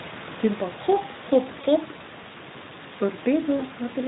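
Speech carrying Speex codec damage throughout: a hoarse, noisy texture that fits a low setting of about 11 kbps. The excitation is starved. Two short dropouts come from VoIP packet loss concealed by the speech codec, at 1.61 to 1.67 s and 3.57 to 3.66 s. Each fits one lost 20 ms frame. The decoder smears the preceding sound into a fading buzzy tone or coloured noise and stays weak briefly afterwards, instead of leaving silence or a click. Room noise sits about 19 dB below the speech.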